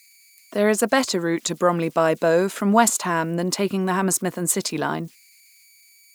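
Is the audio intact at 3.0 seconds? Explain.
No. At 3.0 seconds, as throughout the clip, converter idle tones are present. An undithered delta-sigma converter settles into repeating bit patterns on low-level input, producing a faint whistle around 2 kHz, about 36 dB below the speech, plus grainy noise under quieter passages.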